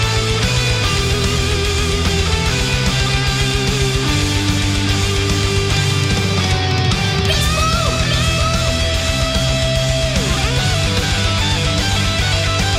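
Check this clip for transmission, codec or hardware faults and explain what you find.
No faults turn up anywhere in the clip. Nothing in it points to a problem along the path it took to get here.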